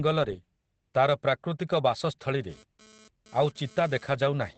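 Opus voice compression runs through this speech clip: nothing survives above 8.6 kHz, and the coarse linear-prediction coding muffles and roughens the voice, which points to SILK at around 12 kbps. GSM phone buzz appears from 2.50 to 4.49 s: a raspy 217 Hz buzz, about 28 dB below the speech, pulses in and out as a nearby handset's data bursts are rectified.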